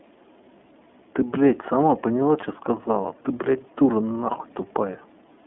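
iLBC codec damage runs through the whole speech clip, from start to finish. Nothing above about 3.7 kHz survives, and the line band sits at roughly 200 Hz to 3.5 kHz, giving a thin telephone timbre. Each 30 ms frame's excitation is coded on its own without drawing on the previous frame, which leaves a plainly audible rough, synthetic grain on the voice, consistent with iLBC's 13.33 kbps mode.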